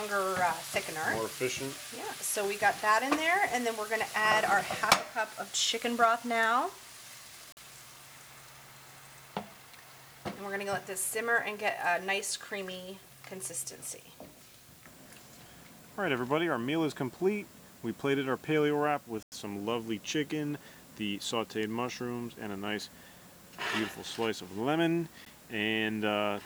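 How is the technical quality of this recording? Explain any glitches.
The technical quality is poor. A constant hiss sits under the whole recording, and three brief dropouts interrupt it.

Throughout, the audio carries low bit depth with dither, consistent with about 8 bits. Dither added before rounding turns the coarse quantisation error into steady white noise instead of distortion, leaving an even hiss only about 25 dB below the signal. On a spectrogram this appears as a uniform grey wash across all frequencies. On a waveform it shows as a thick, fuzzy floor that never settles to a flat line.

Blocks of digital silence occur at 7.52 to 7.57 s (46 ms), 19.23 to 19.32 s (93 ms), and 25.25 s (about 13 ms). Each is a block of silence, as when output buffers go unfilled in time. The lengths fit 2048- and 4096-sample blocks. The sound cuts out abruptly: a tick at 25.25 s, short holes at the other two. 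A waveform shows a near-flat line where the audio drops out, and a spectrogram shows dark vertical gaps.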